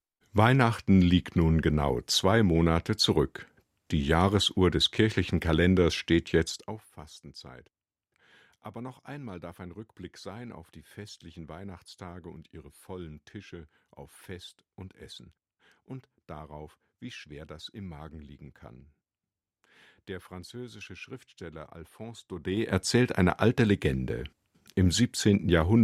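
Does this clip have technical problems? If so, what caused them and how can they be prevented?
Yes. Zipper noise occurs at 6.46 to 6.83 s, as the speech drops by around 20 dB, and at 22.29 to 22.76 s, rising before "eine alte". The gain moves in 2 dB steps without smoothing. Each step clicks, giving a fast ticking. Ramping gain per sample prevents it.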